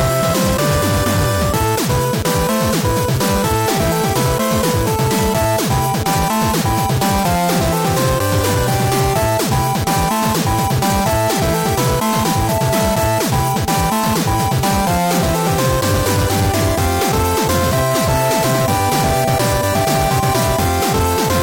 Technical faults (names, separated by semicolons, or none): hard clipping